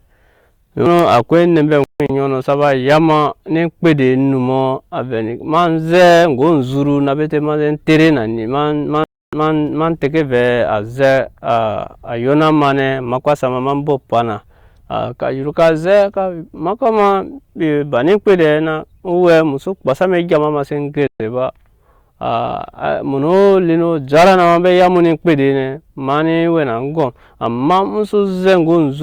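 It's a speech recording with two problems. First, there's hard clipping all the way through. The signal is driven roughly 12 dB past what the chain can pass, so the loudest peaks get sliced flat, around a couple of percent of the samples. Those squared-off tops throw harmonics high up the spectrum, and you hear it as a gritty crackle riding the peaks. Second, there are three digital broadcast dropouts, where the receiver lost good frames and muted until clean data returned. From 1.84 to 2.10 s the sound breaks into a few short holes, the longest about 160 ms. From 9.04 to 9.33 s roughly 290 ms is lost. At 21.07 s, right after "seen go", about 130 ms vanishes. Whatever was said in those gaps is simply gone.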